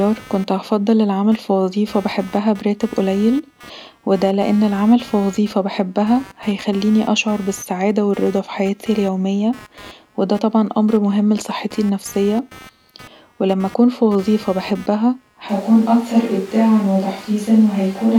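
Computer activity noise runs through the whole recording: a buzzing, scratchy pulse repeating around 200 times a second, sitting roughly 25 dB below the speech. Load changes in the computer disturb the audio circuit's shared ground, so the noise follows machine activity, not the speaking.

At 15.49 s the sound abruptly turns roomy and hollow, with thinner bass and background noise rising to roughly 25 dB below the speech, though the overall level stays about the same until the end. This is likely a switch to a distant microphone after the close one dropped out.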